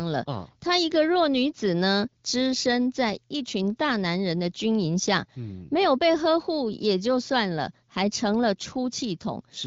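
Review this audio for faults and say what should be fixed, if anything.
No faults found here; nothing needs fixing.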